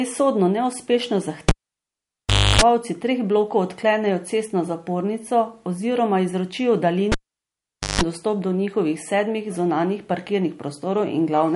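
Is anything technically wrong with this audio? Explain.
Yes, there are two problems. Cable pulled and plugged in, 1.49 to 2.62 s and 7.12 to 8.01 s: a live lead is yanked out and reinserted. Each time a pop follows "sodno neuspešno" and "cestno zapornico oziroma izročijo". Then comes near silence for about 1.1 s and 0.8 s, with 50 Hz mains buzz lasting 0.3 s and 0.16 s while only the tip touches. A second pop comes before "treh blokov odklenejo cestno" and "dostop do njihovih sedmih".

Low-bitrate audio saved at a high bitrate, throughout: the speech carries swirly, smeared MP3 artefacts despite the large file. This is likely a 48 kbit/s MP3 re-encoded at 192 kbit/s, which cannot restore what was discarded.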